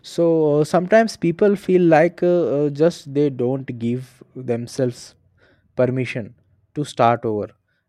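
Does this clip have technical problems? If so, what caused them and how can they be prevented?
No, there are no technical faults in this speech recording, so nothing needs preventing.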